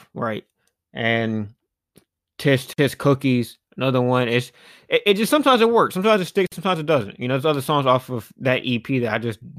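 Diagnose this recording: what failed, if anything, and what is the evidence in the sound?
Gap at a join of encoded pieces (codec stage): 50 ms silences at 2.73 s and at 6.47 s, the second after "it works sometimes it". Untrimmed encoder padding; unlike lost packets, sound resumes exactly where it stopped.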